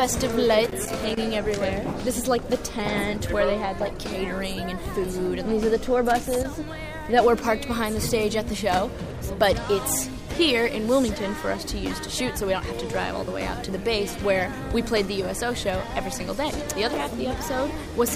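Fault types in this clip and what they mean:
Loose connector crackle: a faulty contact chops the signal in two irregular bursts, near 0.6 s and 6.1 s, visible as jagged waveform spikes and broadband vertical streaks on a spectrogram.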